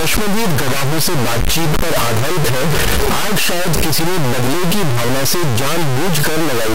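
From start to finish the speech carries a harsh, buzzy distortion consistent with a stuck bit, a converter or data-line fault that likely holds one bit fixed. About half the samples jump by that bit's weight, a high step of about -10 dBFS, so even the pauses fill with loud noise. That noise during silence separates it from clipping, which only roughens the loudest peaks and leaves gaps clean.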